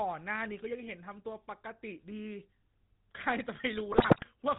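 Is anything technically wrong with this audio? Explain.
Yes, there are two faults: the speech has been through a low-rate mobile codec for its whole length, and near the end it is hit by transmission errors.

The GSM full-rate codec colours the entire clip. It rebuilds the voice from a vocal-tract model excited by sparse, regularly spaced pulses, which fits a 13 kbps stream, and it carries nothing above 4 kHz. The damage is plainly audible as a buzzy, gravelly roughness on every voiced stretch. A spectrogram shows a hard ceiling at 4 kHz with empty space above, and smeared, grainy harmonics below it.

GSM bit errors corrupt the audio from 3.92 to 4.28 s. A weak link delivered flipped bits to the decoder, so filter, pitch or gain values in the damaged frames came out wrong. That reshaped the spectrum and sent the level out of control. The speech breaks into squawks, pops and gargling there. 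The waveform shows sudden amplitude bursts and jagged blocks, and the spectrogram shows abrupt, frame-sized smears of misplaced energy.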